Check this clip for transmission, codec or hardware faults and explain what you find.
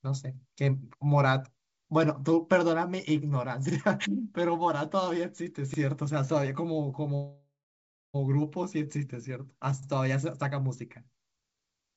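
Two faults are audible in this speech: a recurring stutter from overlapping chunks, and one call audio freeze, heard over a G.722 call path whose bandwidth stops at 8 kHz.

The overlapping chunks appear at 1.65, 3.70, 5.74 and 9.83 s as a brief click-like stutter, where about 44 ms of sound plays twice. The audio was handled in 2-second chunks, each beginning slightly before the previous one finished, so every join repeats a sliver.

The call audio freeze runs from 7.15 to 8.16 s. The sound holds and smears into a fading buzz, then goes silent for about 0.58 s before resuming exactly where it stopped, with nothing lost. The likely cause is delayed packets draining the jitter buffer, so the receiver inserted roughly 0.94 s of filler.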